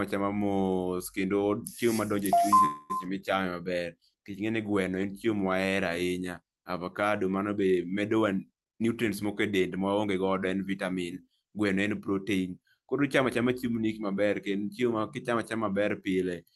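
A speech recording carried over a call link, with highs ending near 12 kHz as the call codec passed them. At 2.65 s the speech stops moving forward and a fading continuation of the last sound fills about 0.24 s until 2.92 s. There is no silence. Then the speech resumes where it left off, so nothing is lost, but everything after runs about 240 ms later. This is a call audio freeze, likely caused by delayed packets leaving the jitter buffer empty while the receiver stretched the last sound. From 8.64 s to 10.23 s the speech runs at about 115% speed with its pitch unchanged, so it sounds hurried. This is a jitter buffer speed-up. The buffer held more audio than its target, so the receiver cut many short pitch-period pieces in a row, removing roughly 0.3 s to bring the delay back down.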